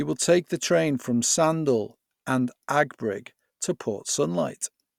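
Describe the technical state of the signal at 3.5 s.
At 3.5 s the speech signal is intact, with no audible fault at that moment.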